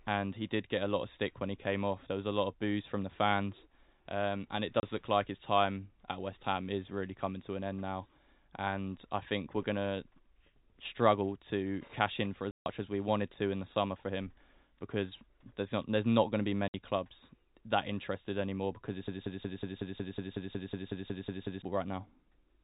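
At 4.80 s, 12.51 to 12.66 s and 16.68 to 16.74 s the speech is cut by packet loss filled with silence. The gaps last 30, 150 and 60 ms, all multiples of 30 ms, which fits one, five and two lost packets of 30 ms each. The receiver inserts silence, not a faded or smeared patch, so each hole begins and ends with a hard edge. That sets it apart from concealment, which would fill the gap with stretched or repeated sound.

From 19.08 to 21.62 s a broken-record loop takes over. A fragment of about 184 ms plays 14 times back to back, with identical copies and no decay between them. That distinguishes it from an echo, which fades, or a stutter, which varies. The upstream player or stream has likely stalled and kept resending its last buffer, so the speech meant for those 2.5 s is lost. The underlying G.711 telephone coding adds its band limit at 4 kHz and at most a faint quantisation noise.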